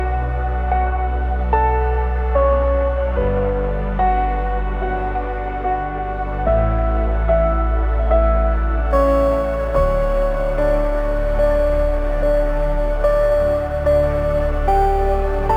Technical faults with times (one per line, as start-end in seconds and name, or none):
8.91-15.56 crude rate conversion